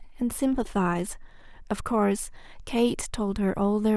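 A short bit of speech with nothing technically wrong to hear anywhere in it.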